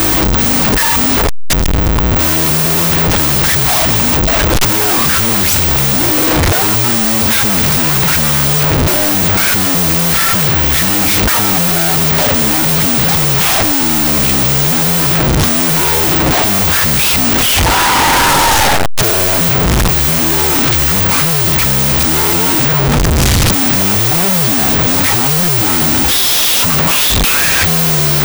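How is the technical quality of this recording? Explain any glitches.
Poor throughout: the whole recording suffers from a wrong sample width, with 16-bit integer data read back as unsigned 8-bit. Each original sample becomes two, so the speech runs at half speed and an octave low. Only the high bytes carry the real waveform. The low bytes add loud hiss-like noise, which is what separates this from a simple sample-rate mismatch.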